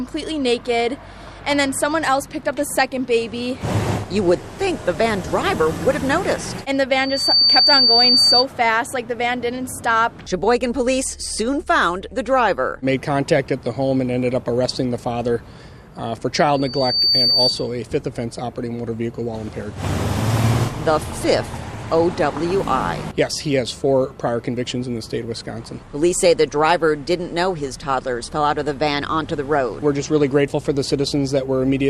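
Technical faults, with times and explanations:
6.91–8.46 s and 16.54–17.74 s, loudspeaker feedback squeal: a 4.6 kHz tone swells over roughly half a second to sit about 5 dB above the sound. Microphone and loudspeaker formed a loop whose gain exceeded one at that frequency, so it grew by itself until the amplifier limited it or the loop broke.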